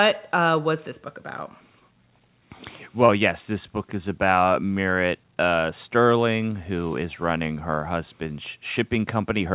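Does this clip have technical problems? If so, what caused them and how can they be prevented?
Yes. Short concealed packet loss at 3.06 to 3.10 s: about 20 ms never arrived in time, so the receiver extended the preceding sound for 23 ms, then blended back. It heard as a brief smear. A larger jitter buffer or forward error correction would prevent it.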